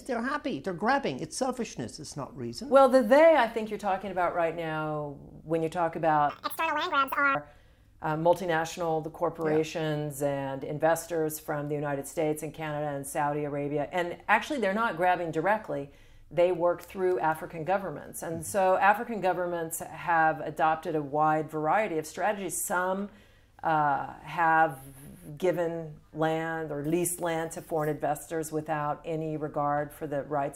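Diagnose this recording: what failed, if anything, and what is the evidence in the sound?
A section at the wrong speed runs from 6.30 to 7.35 s: for about a second the sound jumps to 1.87 times its normal rate, hurried and shifted up by roughly ten semitones, then drops back. Because speed and pitch rise together and snap back at clean boundaries, the fault sits at the editing or playback stage, likely a segment resampled or clocked at the wrong rate and spliced into the otherwise correctly timed stream.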